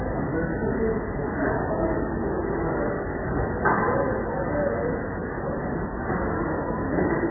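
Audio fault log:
Throughout, MP3 compression: the audio has nothing above 2 kHz and a heavily watery, swirling quality, with attacks smeared. This is likely a very low-bitrate MP3 encode, around 8 kbps. Starved of bits, the encoder discards the treble above a fixed cutoff and zeroes the weaker frequency lines it judges inaudible. Those lines then flicker on and off between frames, producing the warbling texture, while coarse time resolution blurs sharp onsets.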